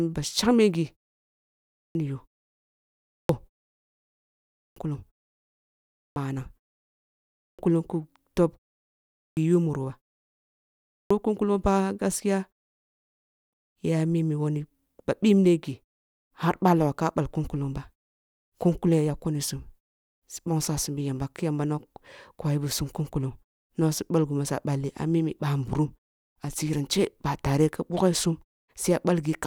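Clipped start after a pause occurs at 1.39, 2.78, 4.28, 5.68, 7.05, 8.85, 10.55 and 12.97 s, the last just before "ya mimi". After each gap of 0.35 to 0.87 s, the output device has gone idle and needs time to wake and lock again, so roughly half a second (0.48 to 0.56 s) of the returning speech is swallowed. Each phrase bursts out of silence with its opening sounds missing.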